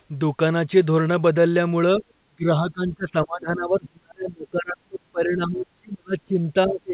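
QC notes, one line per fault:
1.94 to 2.04 s and 2.3 s to end: speech suppressed in double talk. Brief dip of about 10 dB, then cuts up to about 30 dB. Likely echo-canceller overreach.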